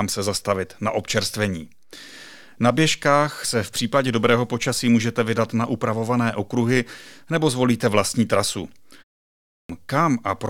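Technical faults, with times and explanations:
9.27 to 9.69 s, clipped start after a pause: after "nebo zvolíte vlastní trasu" and a pause of about 0.32 s, the next phrase bursts out of silence with its opening missing, roughly 0.42 s of speech swallowed while the output device wakes or re-locks. Unlike muted pauses, where only the background drops out in gaps and the speech returns whole, here the first sounds of the speech themselves never arrive, so the onset is abrupt.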